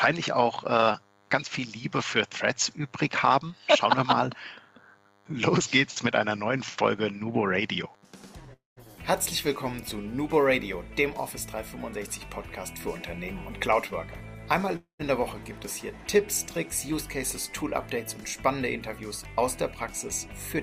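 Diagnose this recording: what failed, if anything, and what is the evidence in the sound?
A thin, steady buzz runs under the whole recording at 100 Hz with a dense stack of harmonics, sitting roughly 35 dB below the programme. This is DECT cordless phone buzz, picked up in the analogue wiring: a nearby DECT handset or base transmits a short radio burst every 10 ms, and some junction in the audio circuit rectifies those bursts into an audible 100 Hz pulse train with sharp edges, hence the rich harmonic content.

At 8.53 to 8.79 s and again at 14.76 to 15.01 s the sound stalls for about a quarter of a second. The last sound smears on as a fading buzz or hiss, then drops to silence for about 160 ms in the first stall and 110 ms in the second before the audio resumes where it left off. Nothing is lost. Each stall simply inserts about 0.23 s of delay. This points to a call audio freeze at the network stage, likely from packets held up in transit so that the jitter buffer ran dry and the receiver had to fill the gap.

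From 17.63 to 18.90 s the audio runs slightly faster, about 102% of normal speed, with no shift in pitch. This is a jitter buffer speed-up in the call processing. The buffer was holding more audio than its target, so the receiver trimmed out short pitch-period-sized slices in quick succession, around 40 ms in total, to pull the latency back down.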